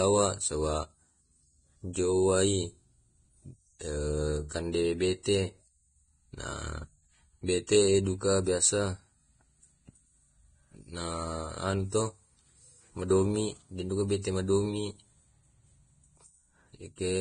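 Speech throughout, with a hard ceiling at 9.7 kHz above which nothing remains, and a grainy hiss in the treble that roughens tones. That combination of a fixed cut-off and a noisy, textured upper band points to heavy Vorbis compression, likely at a rate in the low twenties of kbps. The coarse treble quantisation swaps fine detail for noise of similar energy. That hiss separates it from the watery, warbling artefacts of MP3-style coding or a plain low-pass filter, which would sound dull but clean. Pre-echo appears before four sharp onsets, at 1.93–1.95 s, 4.49–4.51 s, 5.23–5.26 s and 7.67 s. Each is a brief smear of hiss lasting roughly 18 to 24 ms, arriving just ahead of the attack and softening it. The codec spreads quantisation noise meant for the loud onset back across the quiet start of its transform block. Because the hiss leads the attack rather than sitting on it, it is distinct from a click, a breath or a dropout.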